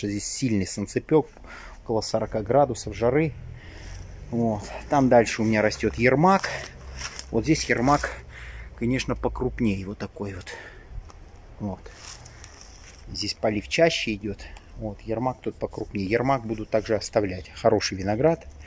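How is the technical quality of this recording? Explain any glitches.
No glitches or technical faults heard.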